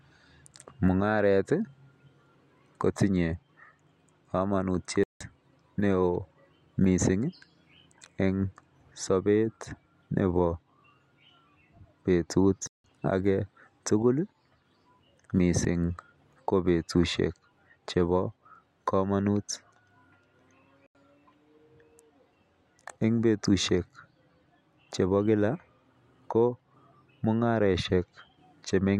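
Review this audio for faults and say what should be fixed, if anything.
Blocks of digital silence at 5.04–5.21 s, 12.67–12.84 s (about 171 ms each) and 20.86–20.95 s (85 ms). The speech drops abruptly to silence and back. The lengths suggest unfilled 8192- and 4096-sample output buffers. Prevent this by giving the audio thread more processing headroom or a larger buffer, so every buffer is filled before it is due.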